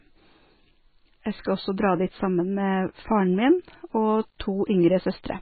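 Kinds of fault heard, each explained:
MP3 compression: likely a very low bitrate, around 16 kbps, starving the encoder, so treble is cut above 4.6 kHz and the speech turns heavily watery and swirly.
Low bit depth without dither: samples were likely truncated to about 9 bits without dither, so from 2.97 to 4.47 s quiet passages turn gritty with signal-following grain.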